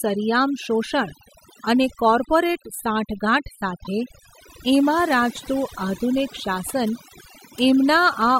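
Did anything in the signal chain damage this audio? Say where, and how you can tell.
Yes. Overdone noise removal in call processing runs throughout: the background drops and breaks up into twinkling specks, unlike plain low-pass dullness.

Repeated frames at the codec or storage stage: at 3.83 to 3.87 s a 24 ms block plays twice, a stutter that lengthens the audio rather than dropping any.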